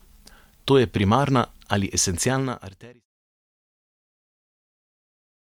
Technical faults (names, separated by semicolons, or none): none